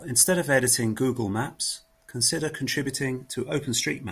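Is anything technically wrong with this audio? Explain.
No, nothing is technically wrong with this speech recording. No technical problem can be heard at any point in it.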